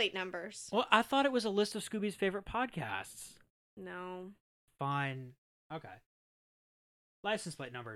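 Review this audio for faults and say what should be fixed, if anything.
From 1.72 to 4.91 s the speech turns thin and phasey. This is channel delay (comb filtering). One channel runs a fraction of a millisecond late, roughly a few samples. Summed to mono, the two copies cancel in notches starting near 5 kHz. Keep both channels time-aligned before any mono fold-down.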